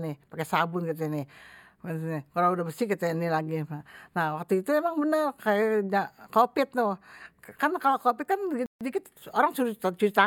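At 8.66 s, right after "kan kalo covid kan", the speech cuts abruptly to silence for about 147 ms, then resumes at 8.81 s. This is a Bluetooth stall, likely caused by interference delaying packets until the headphone buffer emptied and playback paused for retransmission.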